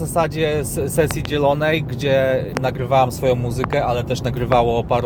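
Loud pops occur as a double at 1.11–1.27 s, a single at 2.57–2.59 s, a double at 3.64–3.75 s and a single at 4.52–4.54 s. Each is a sharp thump peaking well above the signal, with the sound continuing underneath. The likely cause is voltage pulses from a switch, plug contact or static discharge.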